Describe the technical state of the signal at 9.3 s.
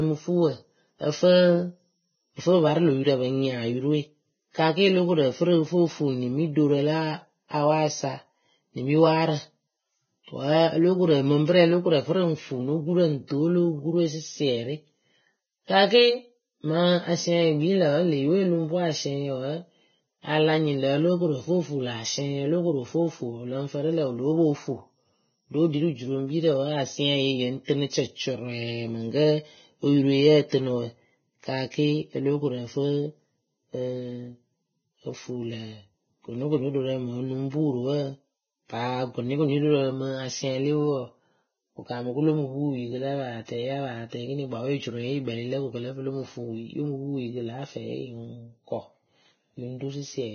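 At 9.3 s the speech carries heavy damage typical of Vorbis compression, present across the whole clip. Nothing sounds above about 6.5 kHz. Treble detail is coarsely quantised into grainy hiss, and consonant attacks blur. This likely comes from a very low bitrate near 16 kbps.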